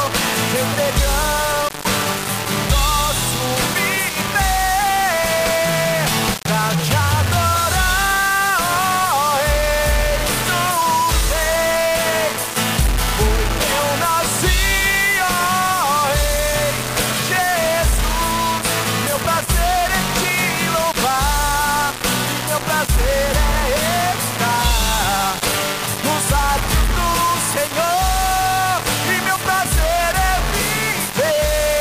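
Grainy distortion runs throughout, tracking the sound and falling silent with it, likely low bit depth without dither, consistent with 3-bit rounding.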